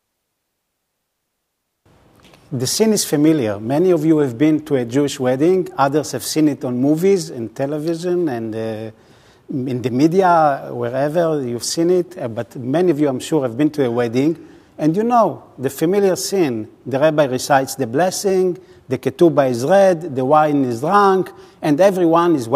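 At 7.87 s the audio carries an electrical switching spike, a sharp snap or tight cluster of clicks sitting on top of the sound and peaking around -20 dBFS. It is likely a nearby switch or static discharge arcing into the line. A waveform shows a narrow vertical spike, and a spectrogram shows a thin full-height stripe.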